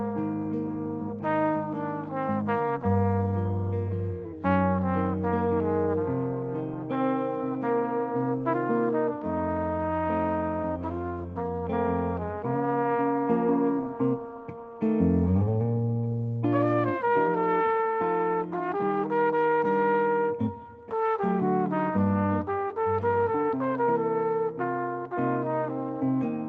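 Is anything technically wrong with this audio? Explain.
No, nothing is technically wrong with this audio.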